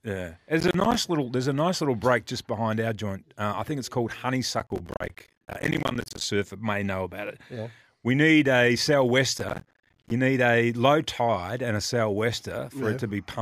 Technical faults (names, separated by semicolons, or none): processor overload crackle